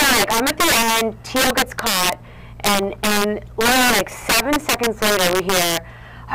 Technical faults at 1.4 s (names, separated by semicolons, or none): integer overflow